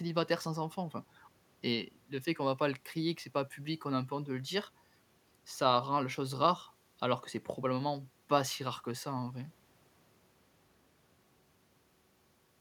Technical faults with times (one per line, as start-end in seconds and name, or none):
none